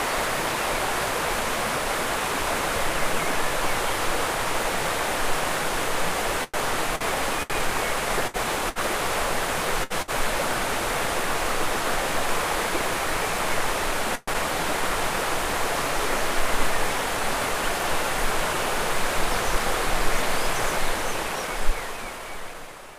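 From 6.44 to 10.11 s, repeated packet loss (robotic sound) breaks the audio into a choppy texture. Seven holes, the longest 99 ms, were patched by extending the preceding sound. The patches fill about 461 ms, 13% of the stretch, and about 240 ms is lost outright.

At 14.15 s a call audio freeze lasting about 121 ms leaves a brief, fading continuation of the last sound. The likely cause is packets delayed in transit that let the jitter buffer run dry. Playback then resumes where it stopped, shifted 121 ms later, with nothing dropped.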